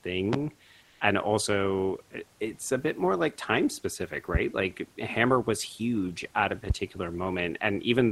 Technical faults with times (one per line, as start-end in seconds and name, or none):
0.33-0.37 loud pop
0.84-1.00 comfort noise in place of the background
6.70-6.73 loud pop